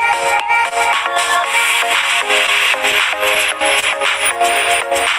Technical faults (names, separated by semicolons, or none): clock drift between sender and receiver; short stall from a late packet